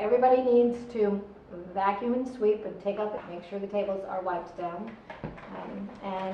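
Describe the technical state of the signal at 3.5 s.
At 3.5 s the jitter buffer is speeding playback up. It trims short pitch-period pieces from 3.27 to 6.29 s, so the sound runs about 8% faster and roughly 0.3 s shorter, at the same pitch.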